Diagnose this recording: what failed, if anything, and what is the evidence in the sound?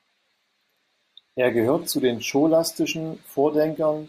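Nothing failed here, as far as the ear can tell, since nothing in this speech points to trouble at any stage of the chain.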